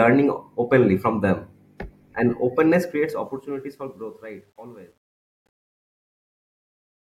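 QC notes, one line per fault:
2.81–7.01 s, truncation distortion on a fade: as the speech fades out from around 3 s, the level is requantised without dither, consistent with about a 10-bit word length. The waveform collapses into coarse steps, turning gritty, worst from 4.18 s to the end.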